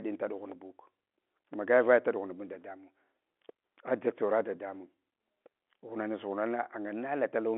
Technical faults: none

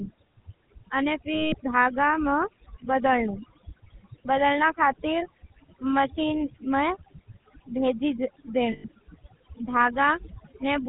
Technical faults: overdone noise removal; GSM full-rate codec; lost GSM frames

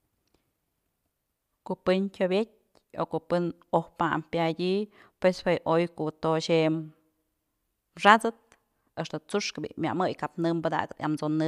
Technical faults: none

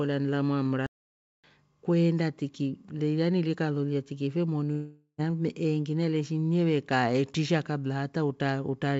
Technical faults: playback stall; long network dropout

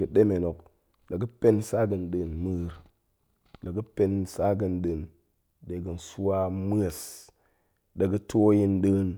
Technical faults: none

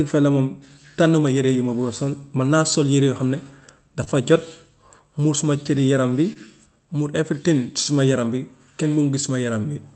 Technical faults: clock drift between sender and receiver; repeated timing corrections; short stall from a late packet

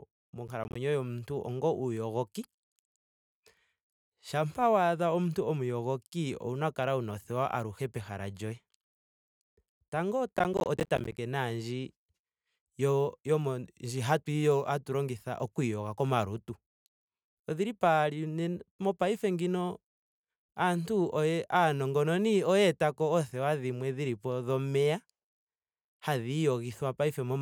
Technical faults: processor overload crackle

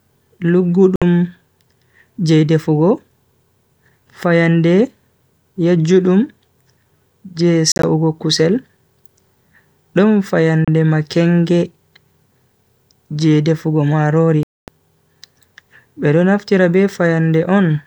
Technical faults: Bluetooth dropout

